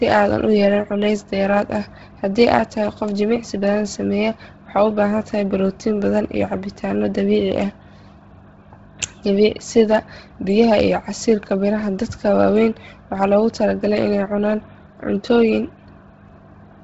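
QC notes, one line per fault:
throughout, Bluetooth LC3 compression: the speech sounds breathy and grainy, heavily degraded, with nothing above 7.7 kHz. The likely cause is an LC3 encode at a very low rate, fitting 16 kbps with 10 ms frames, which zeroes the upper bands and fills them with noise.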